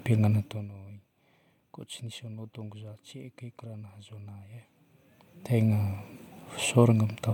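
From 0.36 to 0.72 s the speech falls by about 20 dB with zipper noise: gain moves in unsmoothed 1 dB jumps, roughly a hundred a second, each clicking. It sounds like fast ticking; the waveform envelope forms a staircase, the spectrogram shows faint vertical lines.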